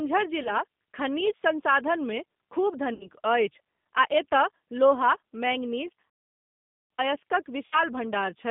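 Speech coded throughout with the G.729 codec: the rough, slightly synthetic texture and a hard spectral ceiling near 3.6 kHz, with little below 150 Hz, fit G.729A at 8 kbit/s. A spectrogram shows an empty band above that ceiling and smeared, simplified harmonics below it. VoIP packet loss concealed by the speech codec occurs three times, at 0.43–0.51 s, 2.94–3.09 s (between "संसाधनमे खूब" and "अछि आ") and 7.66–7.81 s. The decoder stretches the last sound into a fading buzzy tone or coloured noise, which fits roughly 20 ms of missing audio in the first gap and 60 ms in each of the others. On a spectrogram these show as smeared, repeated harmonic bands that dim before the speech recovers. An intermittent contact at 5.88–6.00 s opens the line for about 58 ms. The sound cuts out with crackle at both edges, which appears as a gap in the waveform bracketed by sharp spikes and broadband vertical clicks. 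Immediately afterwards, from 6.10 to 6.90 s, a playback stall leaves about 0.8 s of silence in mid-flow before the speech resumes. The likely cause is the player running out of data. It shows as a flat, empty stretch in both waveform and spectrogram.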